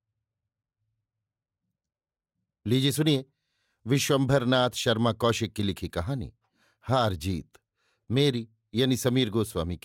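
Nothing here sounds broken at any point in this speech recording, so there's no technical fault to walk through.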